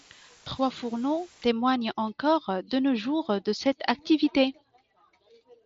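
From 0.0 to 1.5 s, up to "encore de nos jours", a constant, even hiss sits roughly 25 dB below the speech, without distortion. That is low bit depth with dither: at 7 bits, noise added before rounding turns the rounding error into flat white noise.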